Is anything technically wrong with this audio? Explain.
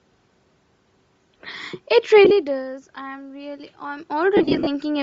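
Yes. Throughout, the speech has a breathy, grainy edge with noise-like upper frequencies, likely from Bluetooth LC3 compression at a low bitrate around 32 kbps, which zeroes much of the treble and fills it with noise.

Lost LE Audio frames turn the sound into a brief noisy smear at 2.25–2.31 s and again, longer, at 4.37–4.67 s. At each gap the decoder reused the last spectrum with random signs. The first loss is short runs spread over about 60 ms, and the second is about 200 ms of gaps spread over 300 ms, with runs up to roughly 50 ms.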